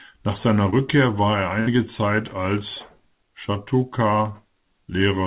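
Speech, carried over a call link whose narrow, telephone-like band with nothing above 4 kHz fits G.711 mu-law coding. At 0.70 to 0.74 s there is short concealed packet loss. About 20 ms of audio never arrived in time. The receiver patched the hole by extending the preceding sound, then blended back in. It comes across as a quick smear or wobble just before "war er". At 1.60 to 1.69 s, right after "war er", a burst of packet loss occurs. Roughly 60 ms went missing in a row. The decoder stretched the last sound and let it fade, giving a brief held buzz or hiss. Then the audio picks up further along, with that stretch gone.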